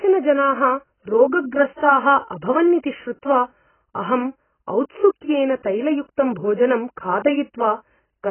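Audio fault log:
throughout: AAC compression, likely a low-bitrate AAC-LC encode near 12 kbps. The speech is dull and smeared, with warbling on sustained sounds. A spectrogram shows a hard ceiling with nothing above 3.1 kHz.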